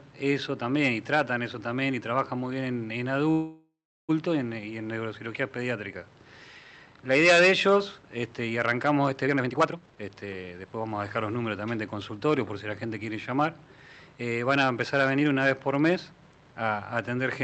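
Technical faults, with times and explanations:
3.31 to 4.11 s, call audio freeze: sound stalls about 0.77 s, the last sound carried on and fading to silence. Likely delayed packets emptying the jitter buffer.
9.25 to 11.17 s, jitter buffer speed-up: audio runs at 140% speed, same pitch, sounding hurried. Roughly 0.7 s of short pieces was cut to shrink delay.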